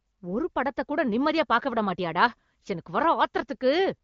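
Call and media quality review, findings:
Nothing stood out on listening to this speech clip over the AMR wideband (HD Voice) path at 15.85 kbit/s.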